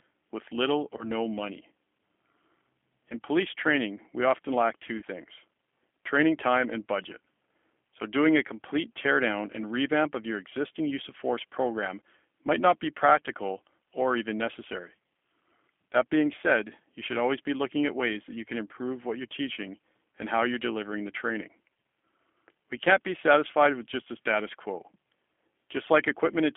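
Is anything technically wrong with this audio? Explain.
Yes. The speech has two faults.

Throughout, the speech carries G.729 codec damage, plainly audible. The band sits at roughly 250 Hz to 3.4 kHz, so nothing bright survives. The coder rebuilds speech from a vocal tract filter, a pitch predictor and a few pulses per frame, which fits G.729A at 8 kbit/s. That model-based rebuild makes the voice sound rough and slightly synthetic.

There is also VoIP packet loss concealed by the speech codec, twice. From 0.97 to 1.10 s, after "with little", about 20 ms of audio was lost. From 4.97 to 5.04 s, after "we often lack two", about 50 ms was lost. The decoder filled each gap by extending its last pitch and filter at falling gain. The result is a brief buzzy, smeared stretch, and the voice stays weak for a moment after the gap.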